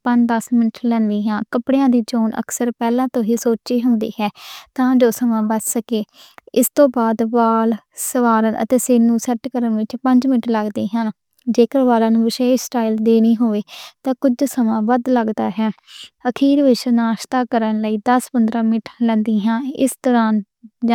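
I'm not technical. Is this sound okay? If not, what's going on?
Yes, this recording sounds fine, with no technical problems to point to. Nothing in it needs fixing.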